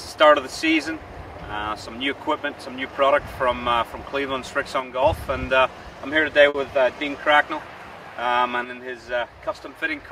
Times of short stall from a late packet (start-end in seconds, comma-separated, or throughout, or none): 6.49-6.56